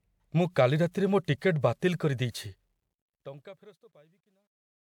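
From 2.42 s to the end at 4.85 s, the fade-out of this speech carries truncation distortion. The fade itself, starting around two and a half seconds, lowers the level smoothly. But the gain stage keeps too few bits, which fits roughly 12-bit resolution, and adds no dither, so the quietest parts collapse into coarse square steps. From 3.7 s onward it is at its worst and turns gritty. Unlike a noise gate, which cuts cleanly, the sound itself coarsens as it fades.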